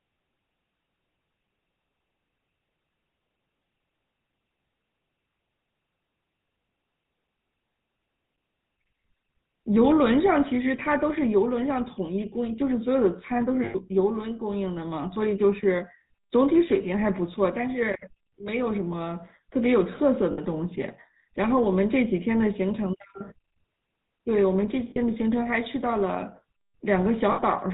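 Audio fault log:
throughout: GSM full-rate codec. The speech passes through a low-rate vocal-tract model, which fits 13 kbps GSM, excited by sparse regular pulses with nothing kept above 4 kHz, so it sounds plainly buzzy, gravelly and dull throughout.
13.64 to 13.76 s, 20.32 to 20.39 s, 24.90 to 24.98 s, 27.32 to 27.40 s: lost GSM frames. Damaged frames, about 100 ms at the first and 60 ms at the others, were replaced by repeating the last good frame's settings, so the sound hangs as a brief rough, metallic ring.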